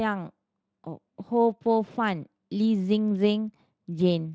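Nothing's gone wrong with this bit of speech; it has simply been carried over a Speex link at around 23.8 kbps, and there's no fault anywhere in it to point at.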